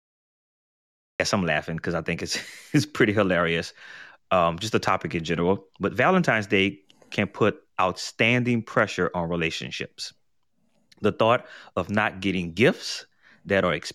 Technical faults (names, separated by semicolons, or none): cut-off start